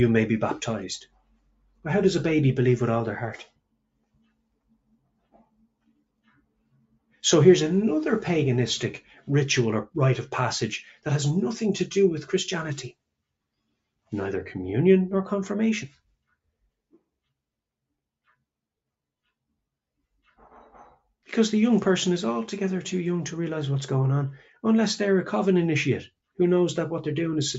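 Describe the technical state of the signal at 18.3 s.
A speech-oriented noise suppressor left running on non-speech sound is acting at 18.3 s, as it does across the whole clip. It treats sustained tones, ambience and decaying tails as noise and pulls them down by around 10 dB, while onsets pass mostly intact, so the sound pumps and thins. Unlike a compressor, it reacts to how steady the sound is rather than to its level. Within the 8 kHz call bandwidth, only the sustained parts fade.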